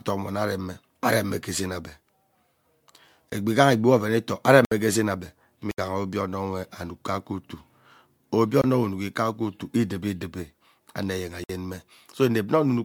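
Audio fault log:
Throughout: generation loss. The sound is smeared and swirly, hollow, and consonant attacks are blurred, more than a single encode at this quality would explain. The likely cause is repeated lossy encoding, about three passes of MP3 at 96 kbit/s, each requantising on a shifted frame grid so the errors pile up. Content extends to 20.1 kHz, so this is accumulated coding damage rather than a narrowed bandwidth.
3.30 s, 4.65 to 4.71 s, 5.71 to 5.78 s, 8.62 s, 11.44 to 11.49 s: block of digital silence. The signal drops to silence and returns with no fade. The holes at 3.30 s and 8.62 s last about 23 ms, which fits a 1024-sample buffer that went unfilled. The others run 64, 70 and 55 ms. The hard edges separate these from a fade or packet-loss concealment.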